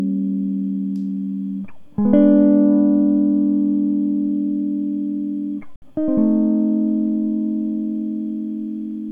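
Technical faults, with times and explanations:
5.76 to 5.82 s, Bluetooth dropout: the music cuts to silence for about 61 ms and then returns further along, as if it had kept playing. This is likely a wireless link losing audio packets, here roughly three, rather than a stalled buffer that resumes where it stopped.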